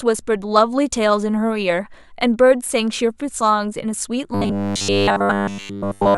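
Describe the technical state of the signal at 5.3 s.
At 5.3 s the speech is in the middle of robotic sound from repeated short buffers, running from 4.34 to 6.17 s. The likely cause is a starved stream padded by looping about 10 ms of audio, which imposes a rigid 100 Hz metallic buzz throughout. Unlike a stutter or dropout, there are no gaps, only a fixed-pitch drone that still loosely tracks the speech.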